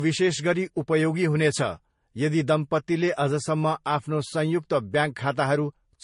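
Transcoding between lossy codecs runs through the whole of the speech: nothing is present above 10.6 kHz, and two different kinds of compression smear are heard at once. The likely cause is an MP3 encode followed by a Vorbis re-encode, with the thin, low-rate sound fitting bitrates near 40 kbit/s. The second encoder spent its limited bits reproducing the first one's artefacts and added its own, so its swirly, watery texture overlays the MP3 smear, and the missing top end persists.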